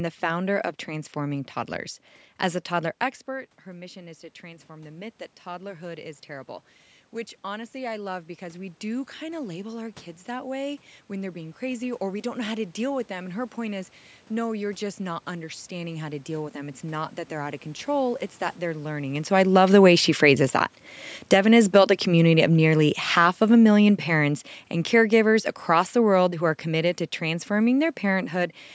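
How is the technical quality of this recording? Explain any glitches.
The recording has two level faults, both from the automatic gain control reacting to the talker's changing distance. The call microphone processing limits the audio to nothing above 8 kHz, and room noise is present throughout.

Automatic gain rising, 3.67 to 20.14 s: The talker moves away around 3 s, and the input drops by about 16 dB. Just after "a toddler expert", the gain control then climbs by about 12 dB over roughly 16 seconds. Voice and room noise swell together, and the level never fully recovers.

Automatic gain falling, 19.35 to 28.34 s: The talker moves back around 19 s, and the raised gain now makes the input too loud. The control pulls its gain down by about 13 dB over roughly 9 seconds. This overlaps the end of the rise, and the voice and background sink in level together.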